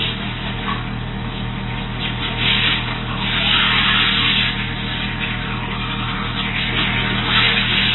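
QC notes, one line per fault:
throughout, AAC compression: nothing is heard above 4 kHz, and the remaining sound is dull and smeared with a warbling, fizzy texture that a clean low-pass filter would not add. The likely cause is heavy quantisation in AAC-LC at a low rate, around 16 kbps.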